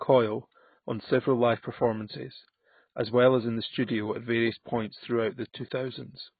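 AAC compression runs throughout: nothing survives above 4.5 kHz, leaving the speech dull, smeared and fizzy on sibilants, likely heavy AAC-LC coding at around 16 kbps.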